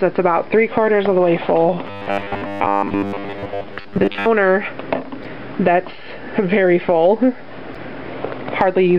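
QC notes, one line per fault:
Throughout: MP3 compression. The codec damage is plainly audible across the whole clip, with a watery, swirling quality and dull, band-limited treble; this is likely the result of an MP3 encode at a low bitrate, around 64 kbps. With that few bits the encoder trims the top end at a fixed cut-off and drops quieter frequency components, which then flicker in and out between frames, so sibilant and bright sounds turn metallic and transients lose their edge.
1.87–4.29 s: robotic sound from repeated short buffers. For about 2.4 seconds the sound becomes a stiff, metallic buzz locked at 100 Hz while still loosely tracing the original. The likely cause is audio arriving too late and the playback filling the gaps by looping a 10 ms fragment, which fits the buzz pitch. Roughly two-thirds or more of this stretch is repeated material, so the genuine audio in between is skipped.
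5.21 s and 7.72 s: damaged data in a compressed stream. Each is a brief blip of about 40 ms. Corrupted bytes in the compressed data make the decoder misread or reject the affected frames and lose sync until it finds the next valid frame header.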